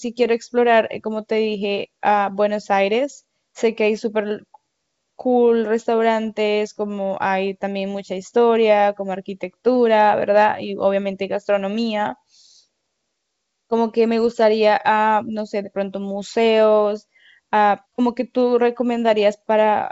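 No technical faults are audible.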